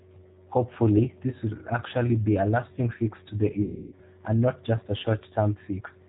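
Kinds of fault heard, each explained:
G.729 codec: the whole recording is squeezed through an 8 kbit/s pulse-based speech model, leaving rough, slightly synthetic speech with nothing above 4 kHz, unlike plain low-pass filtering.
VoIP packet loss concealed by the speech codec: from 3.62 to 3.99 s about 300 ms of audio is missing, replaced by a fading extrapolation of the last sound, a buzzy tone or coloured noise, rather than silence or clicks.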